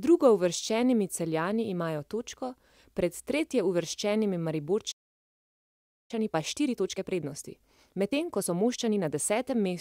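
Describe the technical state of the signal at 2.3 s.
At 2.3 s the speech signal is intact, with no technical fault to be heard at that moment.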